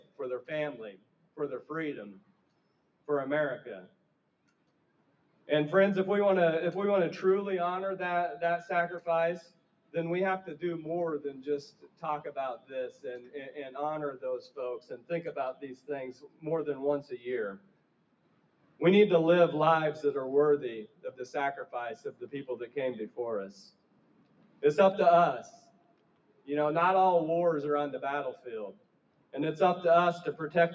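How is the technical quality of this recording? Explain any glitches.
The technical quality is compromised by a speech-oriented noise suppressor. Nothing above 8 kHz comes through, consistent with call microphone processing.

Noise suppressor applied to music or sounds: Throughout, the suppressor treats sustained material as noise, swinging the level by roughly 10 dB. The sound pumps and thins, and the waveform envelope visibly breathes.

Sound cut by the noise suppressor: The dips fall at 0.0–5.48 s, 9.43–9.94 s, 11.71–13.04 s, 14.49–18.81 s, 20.87–21.04 s, 22.08–24.62 s, 25.55–26.48 s and 28.73–29.34 s. Held tones and decays drop by up to about 12 dB, and the longest affected span lasts around two seconds. On a spectrogram these appear as faded horizontal bands and truncated tails.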